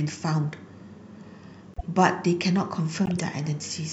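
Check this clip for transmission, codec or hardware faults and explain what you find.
Two bursts of corrupt frames decoded in this speech clip, at 1.74–1.86 s and 3.05–3.19 s. Damaged bits in a handful of compressed frames were decoded anyway, misplacing energy across frequencies and producing a short chirp, squeak, blip or burst of noise, peaking near -20 dBFS, then louder, near -15 dBFS.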